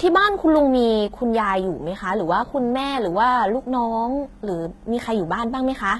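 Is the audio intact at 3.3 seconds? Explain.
No. At 3.3 s the speech carries the same coding damage that runs through the whole clip, most likely HE-AAC compression at a very low rate, something like 16 kbps. Only the lower spectrum is really coded. The treble is rebuilt by copying lower bands upward under a coarse envelope, so its harmonics don't line up with what's below. S sounds come out gritty and lispy, and nothing reaches above about 11.8 kHz.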